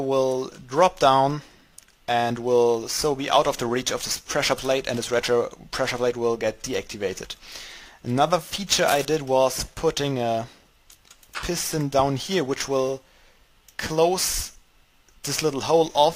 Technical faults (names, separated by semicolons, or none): cable scratch noise